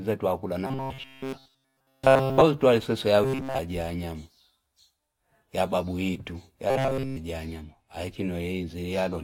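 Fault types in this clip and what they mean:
Robotic sound from repeated short buffers: The speech becomes a rigid, metallic buzz at a fixed 133 Hz. The rough shape of the words still comes through. A pitch that steady fits a chunk of about 7.5 ms being replayed again and again, likely because new audio arrived too seldom. From 0.67 to 2.41 s and from 6.70 to 7.17 s, it replaces all of the sound. From 3.24 to 3.59 s, it covers most of it.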